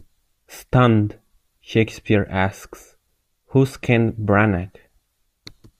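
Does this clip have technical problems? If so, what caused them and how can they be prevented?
No, this clip has no technical problems, so there is nothing that needs preventing.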